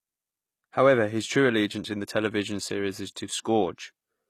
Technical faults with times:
0.00-4.29 HE-AAC compression

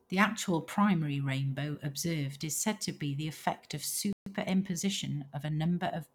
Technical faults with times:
4.13-4.26 playback stall
4.26-5.60 time-compressed catch-up

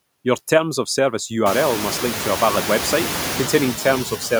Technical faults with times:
0.00-4.39 noise suppressor artifacts

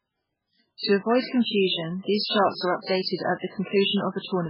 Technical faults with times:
0.00-4.49 MP3 compression

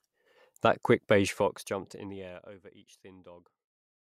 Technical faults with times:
1.15-2.63 zipper noise

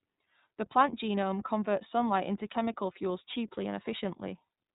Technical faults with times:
0.00-4.75 iLBC codec

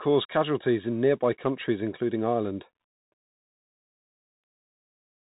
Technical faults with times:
0.00-5.38 Bluetooth CVSD headset codec

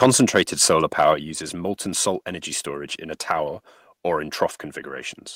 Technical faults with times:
0.04 microphone volume stepped down
0.98-1.10 microphone overload
1.14 microphone volume stepped down

